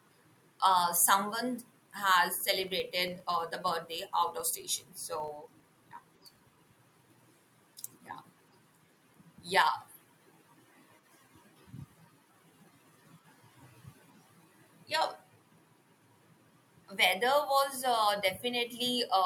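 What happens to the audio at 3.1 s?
At 3.1 s you're right in the middle of a filter restarted on every block problem, running from about 2.64 s, just after "uh someone has", to 6.78 s. The filter throws away its state at each block boundary and starts cold from silence, so every block kicks off with a little transient. Those land 25 times a second, giving a buzzy tick that rises and falls with the speech level and points to blocks of roughly 40 ms.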